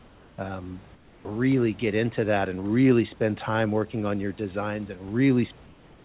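From 0.00 to 0.38 s, and again from 0.95 to 1.25 s just before "get into that and", the room background gives way to a steady, featureless hiss about 3 dB and then about 5 dB quieter. This is comfort noise in place of the background, likely from discontinuous transmission filling pauses with synthetic noise. Unlike a gate or dropout, the pause never goes silent. Only the texture flattens and dips, then the real background returns with the sound.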